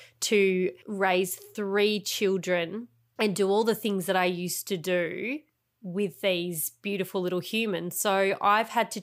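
No technical faults can be heard anywhere in this speech recording. Nothing in how it was captured or played back calls for comment.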